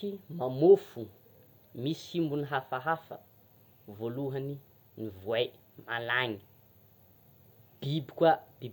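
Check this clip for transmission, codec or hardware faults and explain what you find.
Nothing to flag in this speech recording, since no transmission, codec or hardware fault turns up anywhere in it.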